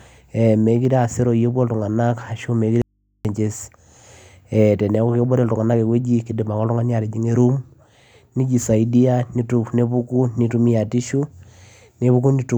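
An audio dropout to a faint residue runs from 2.82 to 3.25 s in this speech recording, losing about 0.43 s of signal. The speech cuts off abruptly mid-flow and returns just as suddenly, with nothing but a low mains hum, roughly 50 dB below the speech level, filling the gap. The likely cause is the wanted feed breaking while the input stage after it stayed live, so the open input picked up hum instead of going silent.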